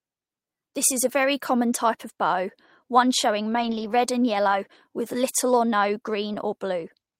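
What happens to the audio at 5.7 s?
At 5.7 s the speech carries on intact, with no dropout, click, distortion or other fault.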